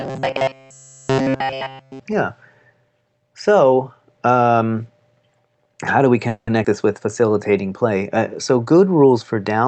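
From 0.01 to 2.0 s the speech has a robotic sound from repeated short buffers: it is a rigid, metallic buzz at 133 Hz. This is likely because nearly all the audio was replaced by repeats of short chunks of about 7.5 ms. A spectrogram shows evenly spaced, dead-straight harmonics of 133 Hz.

At 6.28 to 6.48 s, after "how do we", there is a call audio freeze. The receiver probably ran out of audio and stretched the last sound for 190 ms, fading to 70 ms of silence. Nothing is lost, but "this with" arrives 190 ms later. On the waveform this appears as a decaying smear and then a flat gap.

Between 6.63 and 6.65 s, still between "how do we" and "this with", playback skips ahead. Roughly 70 ms of audio is dropped and the two sides are joined almost directly, which takes back about 50 ms of delay. A spectrogram shows an abrupt seam with no gap.

After "this with", from 7.21 to 7.51 s, a jitter buffer slow-down adds 46 ms by repeating pitch periods. 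The audio plays at 88% speed at unchanged pitch. The harmonics stay level while the sounds stretch out, and the waveform shows the same cycles repeated several times in a row.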